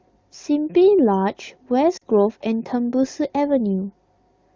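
Speech coded over AMR wideband (HD Voice) has lost AMR speech frames from 1.97 to 2.03 s. About 40 ms, probably two frames, failed their checks, so the decoder repeated the last pitch and vocal tract settings at falling gain. The result is a brief drop to near silence. On a spectrogram the harmonics flatten and fade into a short notch, and the waveform envelope dips before recovering.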